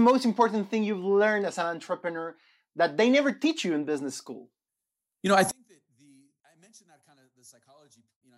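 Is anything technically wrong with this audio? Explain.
Yes. From 5.51 s, after "know I", to the end, one channel is likely inverted; summed to mono, the centred speech cancels and falls about 34 dB, almost vanishing.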